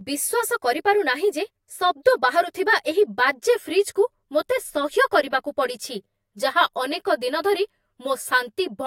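Channel delay (comb filtering) runs through the whole speech clip: one channel arrives roughly 10 ms late, and summing to mono cancels shared content at evenly spaced frequencies, starting near 50 Hz and every 100 Hz above, leaving the sound hollow and phasey.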